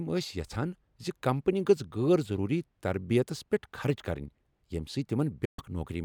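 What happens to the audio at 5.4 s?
A digital broadcast dropout mutes the speech from 5.45 to 5.59 s; the receiver lost its frames and silenced the output, leaving a flat, blank gap after a brief fade.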